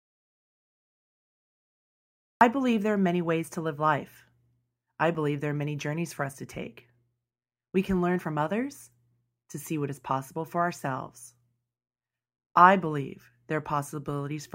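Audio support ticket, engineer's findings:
Audio dropout to silence, 0.00 to 2.41 s, already under way at clip start. Silence, no room tone; speech enters mid-flow at "believe there are many". Likely input loss (disconnected device, failed link or mute) while recorder kept writing silence. Content in gap unrecoverable.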